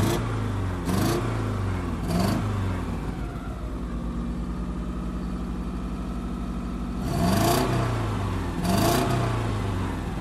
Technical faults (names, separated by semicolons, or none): mains hum